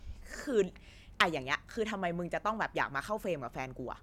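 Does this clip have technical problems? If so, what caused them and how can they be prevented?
No, no technical problems here.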